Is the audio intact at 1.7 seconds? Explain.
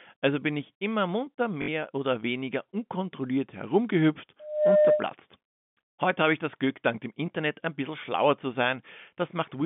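Yes, but only just. From 1.62 to 1.68 s there's packet loss with the last packet repeated. About 60 ms went missing, which fits three 20 ms packets, and the receiver looped the last one. That gives a roughly 50 Hz robotic stutter that clears right before 1.7 s.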